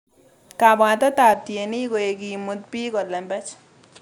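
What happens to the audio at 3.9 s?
At 3.9 s the speech is still in a stretch that begins at 1.34 s and runs to the end. The input has likely switched to a poorer device. From that point the sound is narrower, with nothing above 9.4 kHz, so it turns duller. A new background noise sits well below the speech. The switch is seamless, with no silence, and the level stays about the same. Only the tone and the noise change.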